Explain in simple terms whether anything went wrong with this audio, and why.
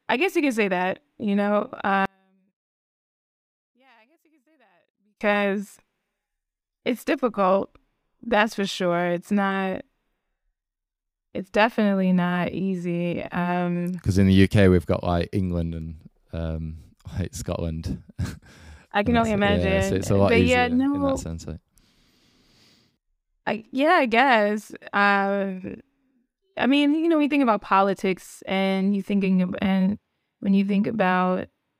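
From about 2.05 to 5.21 seconds, the speech almost disappears and then comes back. The likely cause is one channel inverted: one side of a stereo recording was flipped upside down, so when both sides were combined into one, they cancelled each other out.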